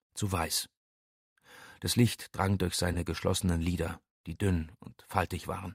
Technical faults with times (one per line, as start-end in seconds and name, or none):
2.93-2.96 corrupt frame decoded